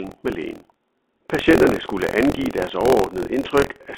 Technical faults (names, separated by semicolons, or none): buffer tearing; packet loss with pitch repetition